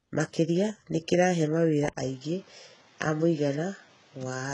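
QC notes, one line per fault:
Throughout, HE-AAC compression: the treble is rebuilt rather than carried, with nothing above 11 kHz, and the coding damage is heavy, which fits a very low bitrate around 12 kbps. Only the lower band is coded, and the upper band is likely spectral band replication, copied lower content shaped by a coarse envelope. This makes s sounds gritty or metallic. On a spectrogram, the upper band shows blocky, smeared texture whose harmonics don't line up with those below the crossover.
1.89 s to the end, input switched to a poorer device: right after "nĩ kĩrahe mawĩra" there is an 80 ms gap, then the sound turns duller and boxier with nothing above 7.6 kHz. The new path likely belongs to another microphone or a headset call profile, which passes a narrower band and brings its own background noise, roughly 30 dB below the signal. The level stays about the same. The waveform shows a brief flat gap, and the spectrogram a sudden drop in top frequency with a new noise floor.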